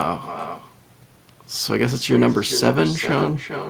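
It's a speech recording, and the whole thing has echo with no canceller running through it. Everything said comes back as a quieter copy, about 10 dB below the direct sound, something like 0.4 s behind, so each phrase trails a thinner shadow of itself. That's the far end playing the call over a loudspeaker, its microphone catching it, and nothing stripping it out before it travels back across the network.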